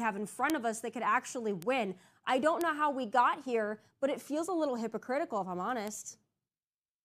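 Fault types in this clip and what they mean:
Bit error spike: a single flipped bit in memory or on a digital link throws one or two samples off by a power of two before they snap back, so you get a lone sharp tick that has nothing to do with the speech. Here there are four, at 0.50, 1.62, 2.61 and 5.88 s, each just a sample or two long. The ones at 0.50 and 2.61 s peak at about -11 dBFS, and the other two at about -17 dBFS.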